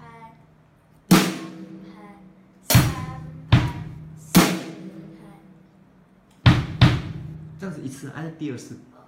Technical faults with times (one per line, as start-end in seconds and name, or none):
none